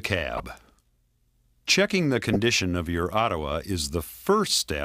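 Two short bursts of a corrupt frame decoded fault interrupt the audio, at 0.36 to 0.40 s and at 2.33 to 2.36 s. Damaged bits in the compressed stream were decoded anyway, so misread gains and codes put energy at the wrong frequencies and produced a brief squeak or noise blip. The first event, peaking at about -20 dBFS, spans a few frames. The second is louder, near -10 dBFS, and its length points to a single damaged frame.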